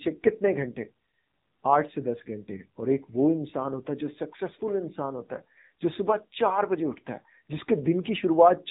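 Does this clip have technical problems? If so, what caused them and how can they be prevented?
Yes. The AMR narrowband mobile codec affects the whole clip. Nothing passes above 3.8 kHz, so the speech sounds muffled and phone-like. The voice is plainly buzzy and synthetic, which fits a low mode around 7.4 kbps. To prevent it, record directly or use a wideband path.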